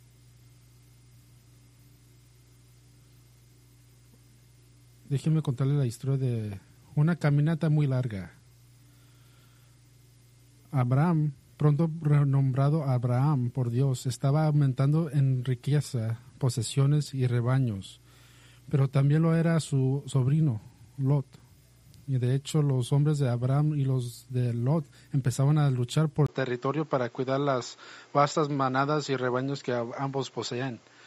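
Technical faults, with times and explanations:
26.27 to 31.06 s, input switched to a poorer device: after a brief 20 ms dropout the sound turns duller, with nothing above 7.6 kHz, drops a few dB, and carries a new background noise around 35 dB down, most likely because recording moved to a narrower-band microphone.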